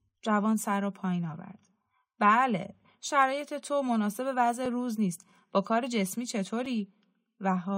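At 4.66 s and again at 6.66 s the speech drops out briefly, a gap between stream segments: adjacent segment timestamps don't meet, and the player pads the difference with silence, about 3.4 ms then 4.8 ms, two seconds apart. Each is a sharp click-like hole, visible as a flat waveform notch and a thin vertical spectrogram stripe.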